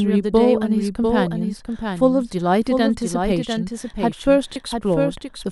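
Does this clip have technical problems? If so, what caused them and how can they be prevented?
Yes. A doubled audio track runs through the whole clip. A second full-band copy of the speech trails the original by roughly 0.7 s at about 5 dB lower. It is most likely a second capture through a slower path being mixed back in. Unlike a room echo or reverb, the copy has no decay and no room colouring. It is one clean, fixed-offset repeat rather than a smeared tail. To prevent it, make sure each source reaches the mix through only one route, such as disabling monitoring or loopback inputs.

At 4.54 s there is a brief gap from lost LE Audio frames. It lasts about 20 ms, which fits two 10 ms LC3 frames. The decoder filled the gap by reusing the last spectrum with randomised signs, so the sound turns into a short noisy smear instead of dropping to hard silence. That smear is what distinguishes it from a plain dropout or a click. 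To prevent it, keep the Bluetooth link strong with short range, fewer obstacles and less 2.4 GHz interference.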